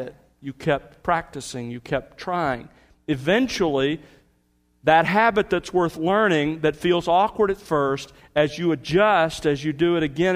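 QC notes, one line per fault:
No faults heard anywhere in this clip.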